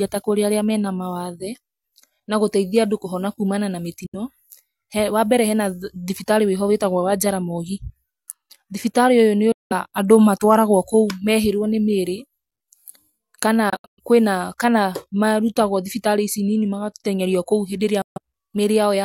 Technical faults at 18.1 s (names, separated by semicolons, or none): Bluetooth dropout